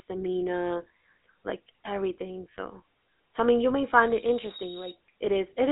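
Speech with a buzzy, gravelly roughness throughout, squeezed into a narrow 250 Hz to 3.6 kHz band with nothing above 3.9 kHz, which fits GSM full-rate codec coding at 13 kbps. From 3.76 s to 5.0 s, just after "so I mean you", a single 3.8 kHz tone swells over roughly a second to about 5 dB above the speech. This is a loudspeaker feedback squeal, caused by the microphone picking up its own loudspeaker and re-amplifying it.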